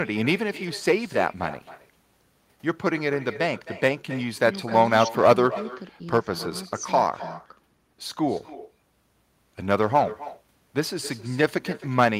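Throughout, echo with no canceller: the far end's loudspeaker feeds its microphone, returning the speech around 300 ms later, about 16 dB down, and thin.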